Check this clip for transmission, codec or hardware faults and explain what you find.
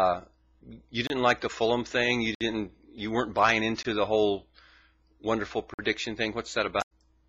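Two kinds of fault are present: four blocks of digital silence and two stretches of damaged data in a compressed stream.

Blocks of digital silence occur at 1.07 s (28 ms), 2.35 s (60 ms), 3.83 s (20 ms) and 5.74 s (50 ms). The output was replaced by zeros, either because the buffer wasn't filled in time or because a calculation produced invalid numbers. Each one cuts the sound out and back abruptly, leaving a short hole.

Damaged data in a compressed stream appears at 3.37 to 3.39 s and 6.78 to 6.92 s. Corrupted bytes made the decoder misread frames and lose sync until it found the next frame header, disrupting the audio there.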